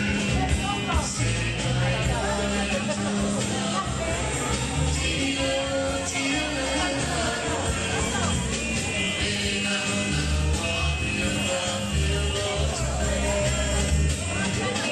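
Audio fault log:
Nothing stood out on listening to this audio.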